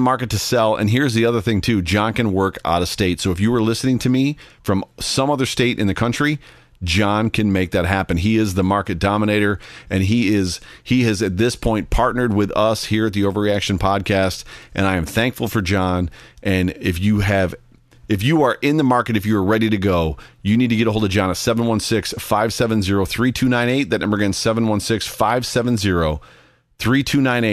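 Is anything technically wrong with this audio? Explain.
No, nothing in this recording stood out as a technical problem on listening.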